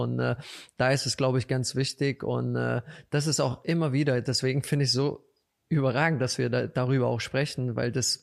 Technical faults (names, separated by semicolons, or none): none